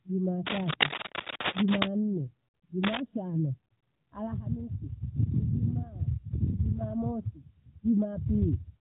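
From 0.46 to 1.88 s, and again from 2.83 to 3.00 s, cable scratch noise sits over the speech at roughly equal loudness: dense, irregular crackling and rustling, likely from a worn cable or connector being moved so its contact resistance fluctuates rapidly.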